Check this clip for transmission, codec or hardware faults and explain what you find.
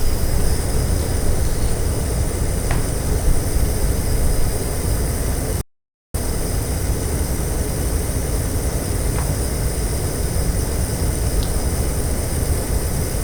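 One fault is present. From 5.61 to 6.14 s an audio dropout to silence cuts out about 0.53 s, likely from lost input while recording continued. The gap is silent with no room tone, unlike a pause or gate.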